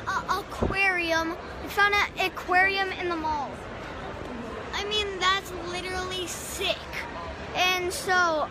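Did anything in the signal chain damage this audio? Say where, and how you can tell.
No, nothing in the chain audibly damages this audio, so there is no stage to point to.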